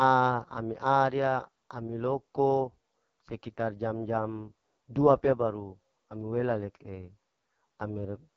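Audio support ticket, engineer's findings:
AMR wideband (HD Voice) codec at its lowest mode throughout; the raspiness fits about 6.6 kbit/s. Pulse-driven vocal tract model starved of bits: speech rough, raspy, heavily degraded for the full clip, with no content above 7.6 kHz.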